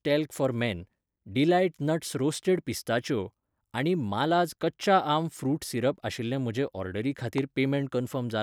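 At 7.38 to 7.40 s, just after "सिरप आशिल्ले म्हजे ऑर्डरी", a single loud pop cuts in, peaking roughly 10 dB above the speech. It is likely a voltage pulse from a switch, plug or static discharge, heard as a sharp click while the speech continues underneath.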